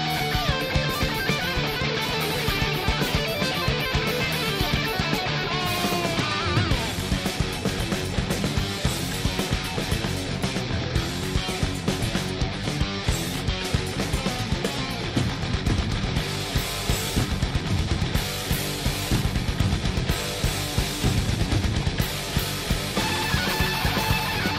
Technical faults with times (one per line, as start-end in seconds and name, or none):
none